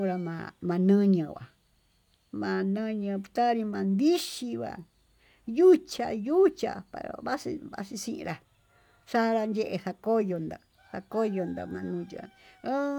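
No technical faults can be heard anywhere in the speech.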